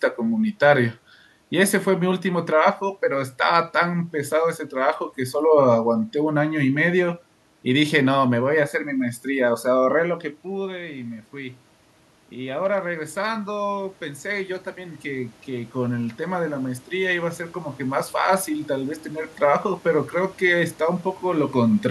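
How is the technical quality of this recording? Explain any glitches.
There's one real glitch here, an automatic gain rising, with some steady room noise underneath and the talker shifting position around 10 seconds and again near the end.

From 12.33 to 19.38 s the level creeps up. The input had dropped by about 14 dB, so the automatic gain control decided things were too quiet and slowly pushed its gain up by about 8 dB over those seven seconds. You hear the voice and the room noise swell together, which gives it away as the gain stage rather than the talker.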